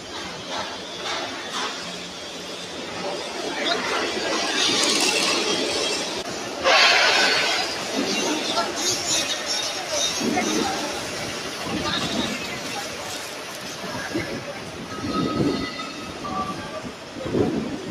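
Throughout the clip a noise suppressor applied to music or sounds treats sustained material as noise, pulling held tones and decay tails down by roughly 5 dB while attacks pass. The result pumps and thins; a spectrogram shows sustained partials fading in patches, with a waveform envelope that dips between onsets.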